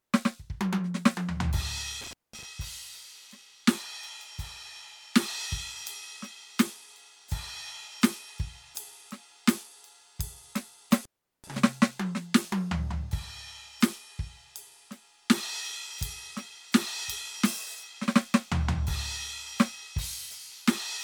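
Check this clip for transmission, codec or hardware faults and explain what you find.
There's an intermittent contact fault in this music, twice: 2.01–2.45 s and 10.91–11.58 s. A loose connection briefly opens, cutting the sound for about 204 ms, then 385 ms, with crackle at each edge.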